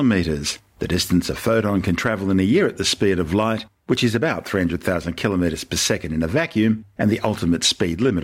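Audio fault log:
Nothing stood out on listening to this speech recording.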